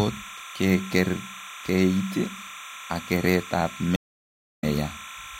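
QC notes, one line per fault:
Throughout, timecode bleed: linear timecode running at 29.97 frames per second on an adjacent track or cable is leaking into the speech path, about 15 dB below the speech. Because the code is a square wave that flips between two frequencies, around 1 kHz and 2 kHz, as its bits change, it sits behind the speech as a continuous chirping warble with a steady frame-rate rhythm. It is audible under the speech.
3.96 to 4.64 s, stream reconnect: right after "ak kereet ab" the network connection dropped. The player went silent for about 0.64 s, then reconnected and started a fresh decoder partway through the stream. The speech therefore picks up around 0.4 s further on than where it stopped, so that stretch is missing. The restart also makes the first moments come back softened as the new decoder fades in.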